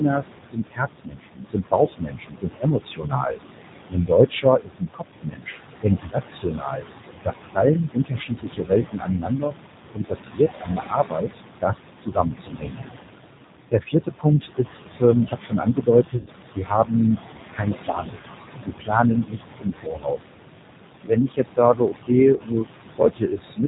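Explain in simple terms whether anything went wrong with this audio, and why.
Quite a bit went wrong, and it's speech the whole way through.

First, there are noise suppressor artifacts throughout. A noise suppressor keeps deciding which parts of the sound are steady background hiss and turning those down, many times a second. Here it pushes the room noise well down, and that noise was already sitting fairly close under the speech. You can hear the background dip between phrases and come back under them.

Second, the whole clip has gone through the G.729 codec, a low-rate phone-call codec. It doesn't send the actual waveform. It sends a rough description of the voice's shape and pitch, and the far end rebuilds speech from that. Anything above about 4 kHz is gone, so it sounds muffled and boxy, and the damage here is plainly audible: a slightly rough, synthetic edge on everything.

Third is speech cut by the noise suppressor. 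The suppressor mistook parts of the talking for noise and turned them down along with the background, so soft consonants and word endings get swallowed. It happens in stretches at 0.00–3.38 s, 3.89–9.56 s, 9.94–12.83 s, 13.71–16.93 s, 17.52–18.17 s, 18.65–20.32 s and 21.04–23.66 s. Within each stretch a good chunk of the speech is affected, from around half a second up to a few seconds of it.

Finally, there's VoIP packet loss concealed by the speech codec, twice. At 16.17–16.30 s about 90 ms of audio never arrived. At 22.36–22.41 s about 30 ms went missing. In both places the decoder papered over the gap by stretching out the last bit of voice it had and fading it. That comes out as a short buzzy or smeared blip, and because each bit of rebuilt sound leans on the previous one, the voice stays weak or off for a moment afterwards.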